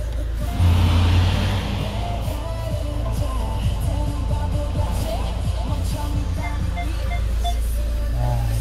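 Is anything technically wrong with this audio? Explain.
Yes. From 1.81 to 1.84 s a brief stutter breaks the sound: a slice about 21 ms long plays twice with a hard join. This is a repeated buffer. Audio arrived late, so the device replayed its last block once, which fits a 1024-sample buffer, and roughly 20 ms went missing.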